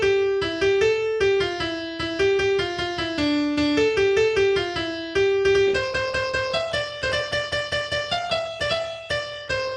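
At 5.67 s the sound abruptly loses quality and stays degraded to the end: a switch to an adaptive stream at a lower bitrate. The player dropped to a cheaper encoding when throughput fell, with no gap at the changeover. Coding artefacts become audible. The contrast with the first part is consistent with a move from roughly 64 kbit/s Opus to about 16 kbit/s.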